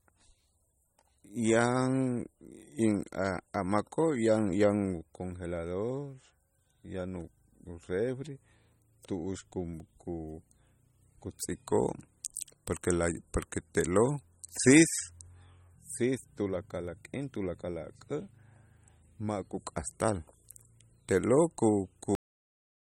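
From the start, the speech carries low-bitrate audio saved at a high bitrate. The likely cause is an MP3 encoded at a low rate and then re-encoded as a large, high-rate MP3 that cannot restore what the first pass discarded. The top of the spectrum stops dead at 16.6 kHz, and the smeared, watery coding artefacts of that first encode persist throughout, which fits an original around 32 kbit/s.

At 22.15 s the clip has a cut-off end: the final buffers were never written out, so the speech stops partway through a sound. Instead of trailing away naturally, it falls straight to digital silence with no decay, and that silence holds for the remaining fraction of a second.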